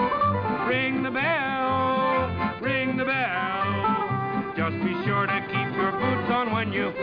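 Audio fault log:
No fault is logged for this audio.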